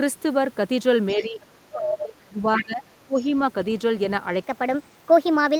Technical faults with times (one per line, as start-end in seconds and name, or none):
1.15-3.17 speech suppressed in double talk
1.85-2.02 other side's voice leaking through
2.56-2.65 other side's voice leaking through
3.18-3.26 other side's voice leaking through
4.44-5.59 section at the wrong speed